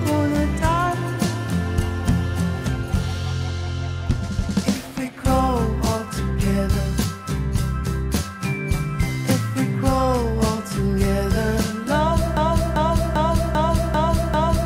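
A broken-record loop starts at 12.37 s: a 0.39 s fragment repeats six times to the end, likely because playback stalled on its last buffered piece.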